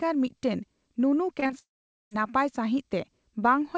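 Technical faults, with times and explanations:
1.40 to 1.51 s, short concealed packet loss: three back-to-back 20 ms gaps, at 1.40, 1.44 and 1.47 s. The receiver patched each one by extending the last bit of sound, so you get a quick smeary wobble rather than a clean break, and anything short in there can vanish.
1.59 to 2.13 s, long network dropout: about half a second goes missing. The last sound carries on and fades out, then mostly silence until audio picks up again without the lost part. The likely cause is packets that simply stopped arriving. The band tops out at 8 kHz, consistent with a G.722 call codec.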